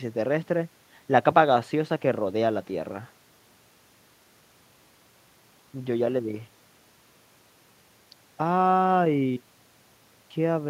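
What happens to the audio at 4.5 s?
Nothing goes wrong at 4.5 s; the speech carries on intact through that moment with no dropout, click or distortion.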